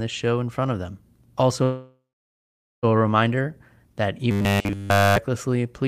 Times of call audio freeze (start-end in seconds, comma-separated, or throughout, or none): 1.63-2.85